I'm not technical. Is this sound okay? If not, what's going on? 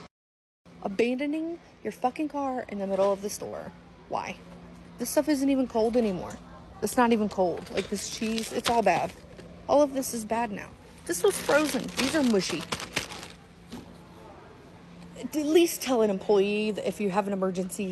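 No. At about 3.48 s there's a burst of packet loss: a short stretch of the audio, around 65 ms, never arrived in time during the call. For roughly the first 45 ms, the receiving side stretched out the last sound it had and let it fade, which sounds like a brief buzz or hiss. Then the audio jumps ahead, with about 40 ms simply missing. Unlike a plain dropout, the gap isn't silent. It's briefly smeared over.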